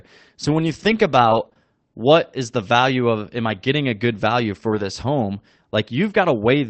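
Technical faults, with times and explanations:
0.43–1.01 s, 1.25–1.47 s and 4.71–4.85 s (just after "getting a good value"), lost packets rebuilt from error correction: no gaps, but these stretches sound rougher and noisier because the decoder played lower-bitrate redundant copies carried in the following packets. This is consistent with 20 ms packets.
1.49–1.57 s, short concealed packet loss, two consecutive 20 ms holes just before "what is the value": the receiver extrapolated the preceding sound to fill them, then crossfaded back, leaving a brief smear or wobble where real audio never arrived in time.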